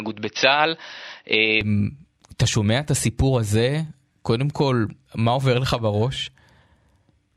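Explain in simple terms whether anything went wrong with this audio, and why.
For the first 1.61 seconds, the sound is duller than the rest of the clip. Nothing above about 5.9 kHz gets through, so the crisp top end is missing. At 1.61 s the brightness returns with no gap. The loudness stays the same, and any added background hiss is very faint. The likely cause is an input switched to a poorer device: the recording started on a weaker microphone, then moved to a better one.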